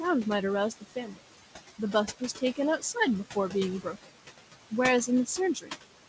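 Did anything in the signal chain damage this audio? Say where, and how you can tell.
Yes. The damage happens at the call-processing stage, in the noise suppressor. The room noise sits only about 12 dB below the speech, and the suppressor pulls it down by about 16 dB wherever it judges the signal to be noise. As a result, the background sinks in the gaps between phrases and comes back up under the speech.

The same suppressor also cuts speech in three places: 0.81 to 1.19 s, 3.82 to 4.17 s, and 5.55 to 5.76 s. In each span, quiet parts of the speech were treated as noise and attenuated, by about 13 dB, 18 dB and 12 dB respectively. Roughly 150 to 200 ms of each span is affected, and those stretches sound swallowed or faint. The deepest cut is near 4 s. The band limit at 8 kHz fits a G.722 wideband call path and is not part of this damage.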